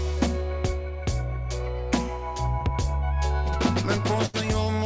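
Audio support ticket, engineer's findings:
Burst of packet loss, 4.26–4.36 s: held, fading fill for about 76 ms, then resumes roughly 80 ms further on. Jitter buffer concealment over lost packets, on a G.722-band path with no content above 8 kHz.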